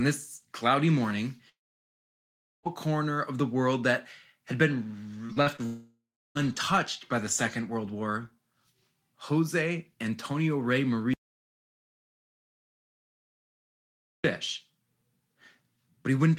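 A speech recording with network and input failures at four points. From 1.49 to 2.67 s the sound breaks off for about 1.16 s and comes back further on with that stretch missing. The receiver continues the last sound only very briefly before falling to silence for about 1.11 s, most of the gap, which points to a long network dropout as the likely cause. Between 5.27 and 5.6 s the stream suffers repeated packet loss: four separate holes, the longest 40 ms, are each patched by extending the preceding sound, so about a third of that span is synthetic fill. The speech turns choppy and robotic, with small fragments lost. Straight afterwards, from 5.66 to 6.37 s, about 0.7 s of audio goes missing. The concealment buzz lasts much longer here before the last 0.33 s or so drops to silence, and the speech resumes past the lost section, again most likely a long network dropout. From 11.14 to 14.24 s the audio input likely failed, through a lost link, disconnected device or accidental mute, while recording carried on writing silence. 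The result is an audio dropout to silence of about 3.1 s. The speech cuts off mid-flow, the gap holds silence with no room tone, and whatever was said in that time is gone.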